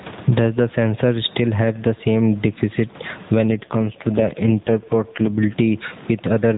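Speech carried over an AMR narrowband mobile link, with nothing above 4 kHz, shows gain pumping throughout. The quiet room noise, normally about 35 dB below the voice, is caught up in a gain swing of around 15 dB. The likely cause is input gain set far too high, with a fast limiter or compressor clamping down on each peak. What separates this from noise suppression is that loud and soft passages are squashed toward one level. From 3.48 s to 5.60 s there is an AMR rate drop, with the codec stepping down from 12.2 kbps to 4.75 kbps, presumably on a weak radio link where the network trades speech bits for error protection. The voice turns buzzier and more synthetic, and the background takes on a swirling quality, then clears once the rate returns. Unlike a bandwidth switch or a packet loss, the band stays the same and there is no gap or dropout. Only the texture of the voice degrades.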